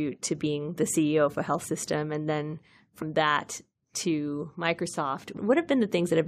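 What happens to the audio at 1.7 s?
Compressed frames were skipped between 1.61 and 1.66 s, right after "of a health" and before "and then", so the decoder jumped ahead by roughly 50 ms of speech.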